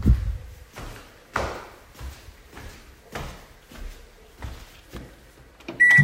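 No technical faults are audible.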